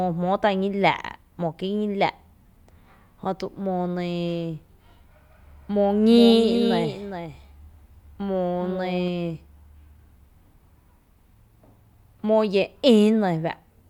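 From 6.1 to 9.08 s there's a doubled audio track: a dry copy about 10 dB down trails by roughly 400 ms, likely from a second, slower capture path.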